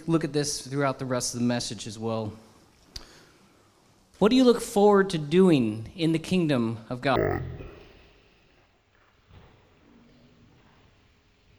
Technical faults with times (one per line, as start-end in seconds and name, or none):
7.16-11.58 stereo read as mono